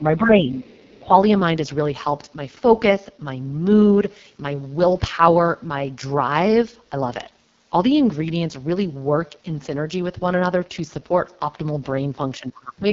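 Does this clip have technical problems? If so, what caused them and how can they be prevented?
Yes. The speech runs through the AMR wideband (HD Voice) codec throughout, sounding rough and raspy with nothing above 7.5 kHz, which fits the lowest 6.6 kbit/s mode. Prevent it by keeping the network on 12.65 kbit/s or higher.

Speech is suppressed in double talk from 0.00 to 0.53 s (dipping about 15 dB), 1.01 to 1.13 s (a slight dip) and 12.4 to 12.92 s (a deep dip, about 25 dB), likely because the echo canceller attenuated both sides. Prevent it with an echo canceller that keeps full-duplex operation during overlap.

The other side's voice leaks through faintly from 0.58 to 1.00 s, about 20 dB below the speech, likely loudspeaker echo the canceller left in the microphone signal. Prevent it by using a headset or giving the canceller longer convergence and stronger residual suppression.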